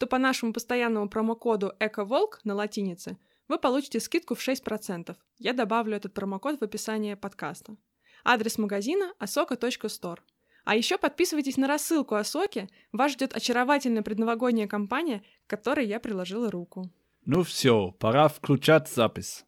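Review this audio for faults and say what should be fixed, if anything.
There's a regular click in the speech roughly every 4.87 s, from 2.73 s to 17.35 s, just before "все пора", about four in all. That steady spacing points to clock drift buffer slips, likely two devices around 150 ppm apart, dropping or repeating a few dozen samples each time. To prevent it, lock both devices to a shared word clock or use adaptive resampling across the boundary.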